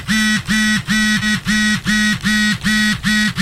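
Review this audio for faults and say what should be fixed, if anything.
At about 1.21 to 1.23 s, a skip ahead occurs: a stretch of audio was discarded, either in transit or when an overfilled jitter buffer dropped it to catch up, while later audio was already waiting. Roughly 0.7 s of sound is missing, and the two sides are butted together with no fill. Playback lurches forward abruptly. To prevent this, let the buffer drain gradually through time-scaling rather than discarding large blocks, and investigate the network path that delivered audio late.

From 3.09 to 3.35 s, a jitter buffer speed-up occurs: the receiver held more audio than its target delay and trimmed short pitch-period-length pieces repeatedly to shrink it, removing something like 70 ms in total. The sound plays at about 123% speed with unchanged pitch and feels hurried. To prevent this, smooth out packet arrival bursts and cap the compression rate so catch-up is spread more gently.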